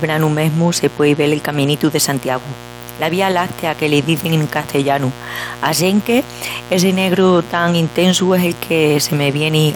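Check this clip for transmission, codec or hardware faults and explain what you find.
A steady, raspy mains buzz runs under the speech for the whole clip, sitting only about 20 dB below it. It comes from 60 Hz mains interference entering as sharp switching spikes twice per cycle, spraying harmonics well into the kilohertz range rather than a smooth hum.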